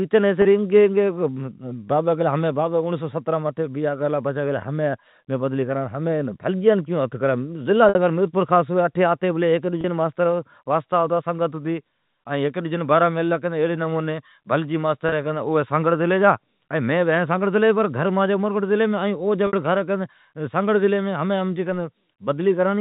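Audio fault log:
0.42, 7.89, 9.81, 15.09 and 19.47 s: packet loss with pitch repetition. The speech briefly goes slightly held and buzzy as the receiver fills each dropout by looping the last pitch cycle. The gaps at 0.42, 9.81 and 15.09 s last 30 ms, and those at 7.89 and 19.47 s last 60 ms, which fits one and two lost packets. A spectrogram shows short stretches of frozen, evenly spaced harmonics. The waveform shows identical repeating cycles where the speech should be changing.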